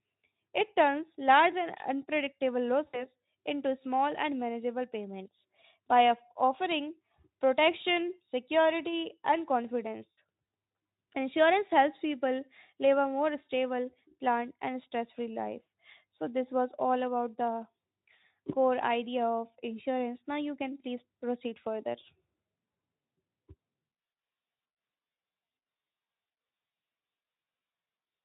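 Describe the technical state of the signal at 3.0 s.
At 3.0 s the sound smears into a buzzy tone or a coloured noise that fades, from 2.88 to 3.07 s, between "turns large and unpredictable" and "into small and manageable". This is VoIP packet loss concealed by the speech codec: about 60 ms went missing, and the decoder extended its last pitch and filter at falling gain.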